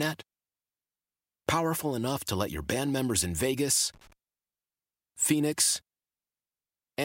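A speech recording with one irregular burst of crackle and scratching from 3.94 to 4.13 s, lasting about 0.19 s. This is loose connector crackle: a worn or dirty contact in the signal path keeps making and breaking as it shifts, chopping the audio into rapid fragments.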